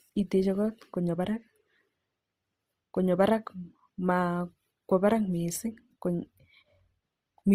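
Throughout the speech there is plainly audible Opus compression, likely from music-mode encoding at a low rate, which fits roughly 24 kbps. The full bandwidth is kept, but starved bands are filled with folded or noise-like energy, leaving voiced sounds rough and grainy.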